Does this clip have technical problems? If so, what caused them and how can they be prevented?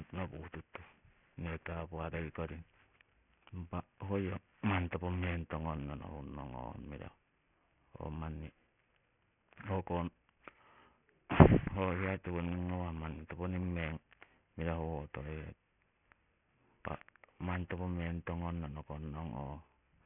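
Yes. Aliasing runs through the whole speech clip: sibilants sound gritty and metallic, with energy folded back below 3 kHz at unrelated pitches, about 15 dB under the speech. That points to downsampling from 44.1 kHz to 6 kHz with no anti-aliasing filter. Unlike plain low-pass dulling, the top isn't just missing; it returns as harsh false tones. Prevent it by low-pass filtering below the new half-rate before resampling.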